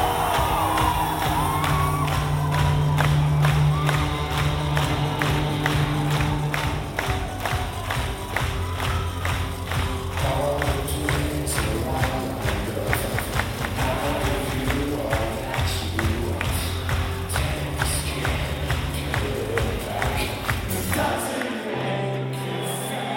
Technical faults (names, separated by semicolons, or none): doubled audio track